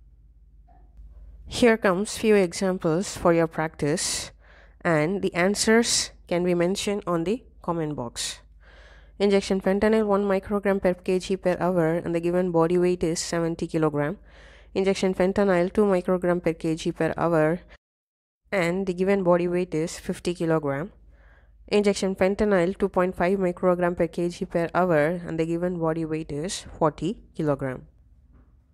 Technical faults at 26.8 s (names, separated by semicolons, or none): none